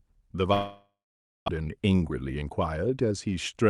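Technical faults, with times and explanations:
0.53–1.50 s, long network dropout: The last sound is stretched into a fading buzz, then about 550 ms of silence follows. Speech resumes with roughly 600 ms gone. No audio likely arrived for this stretch, so the receiver filled the gap and then fell silent.
1.57–3.70 s, jitter buffer speed-up: The speech runs at 110 % speed, with pitch unchanged, and sounds hurried to the end. The buffer held more audio than it aims for after the gap. The receiver cut short pitch-period pieces, about a fifth of a second in total, to reduce its delay.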